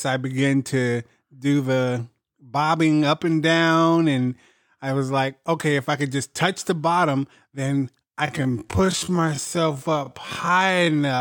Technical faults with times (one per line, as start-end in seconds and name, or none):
8.21-11.21 time-stretched section